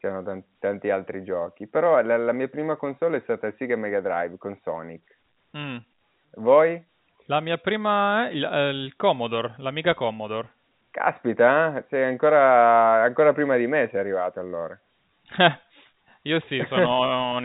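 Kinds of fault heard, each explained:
No faults heard in this speech; the G.711 telephone coding band-limits it, with nothing above about 3.8 kHz.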